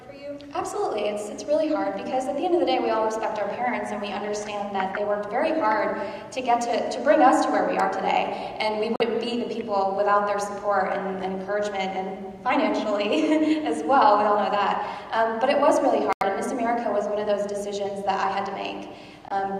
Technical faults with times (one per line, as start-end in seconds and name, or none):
8.96-9.02 Bluetooth dropout
16.13-16.23 Bluetooth dropout
19.28-19.32 Bluetooth dropout